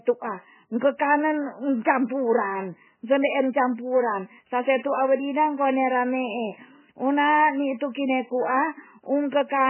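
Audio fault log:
Throughout, MP3 compression: the speech sounds watery and swirling, with nothing above 3 kHz, so s sounds lose their hiss and attacks smear. This is likely heavy low-bitrate MP3 encoding, around 9.6 kbps, where weak frequency lines flicker between frames and the treble is cut.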